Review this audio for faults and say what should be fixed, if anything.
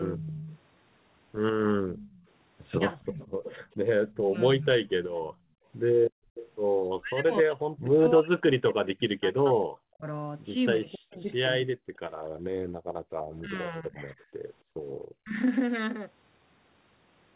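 Speech suppressed in double talk at 0.15 to 0.49 s, 2.98 to 5.02 s and 6.88 to 15.36 s. The talker's level dips by about 15 dB in the first stretch, about 30 dB in the second and about 40 dB in the third, affecting it for roughly a third of a second, about a second, and around five seconds in total. The likely cause is that both sides spoke at once and the echo canceller, unable to separate the local talker from loudspeaker echo, turned everything down. To prevent this, use an echo canceller with better double-talk detection, or a headset that keeps the far end out of the microphone.

Background gated by the echo canceller at 1.82 to 1.98 s, 5.3 to 6.35 s and 12.31 to 14.79 s. The room sound drops by about 11 dB in the first instance and about 38 dB in the later two, with roughly half a second and a second of affected time in those longer stretches. While the loudspeaker was active, the canceller clamped the microphone hard and the room sound returned once it let go. 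Softening the suppression, or adding comfort noise, would prevent these holes in the background.

Echo leak from 1.98 to 6.51 s. A delayed copy of the voice trails the original by 280 ms at about 20 dB below the direct speech, audible as a faint second voice behind the first. This is likely because the loudspeaker side's echo canceller did not fully remove what its microphone picked up, so the remainder was sent back. Better echo-path tuning on the loudspeaker end, or lower playback volume there, would prevent the leak.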